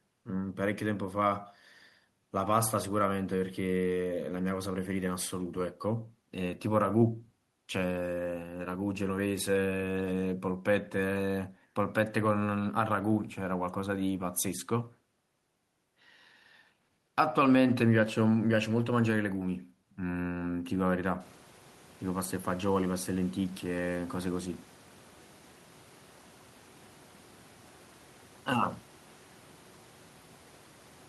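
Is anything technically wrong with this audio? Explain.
No, nothing's wrong here; the room's own background noise gets noticeably louder around 21 s, up by about 21 dB, but that's just the space the microphone is in, and it still sits about 27 dB under the speech.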